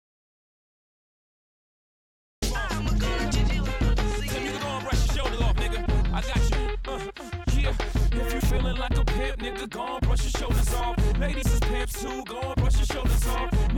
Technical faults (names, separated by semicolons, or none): audio dropout to silence